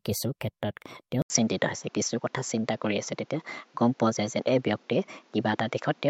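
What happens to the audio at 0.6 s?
Nothing goes wrong at 0.6 s; the speech continues intact through that moment.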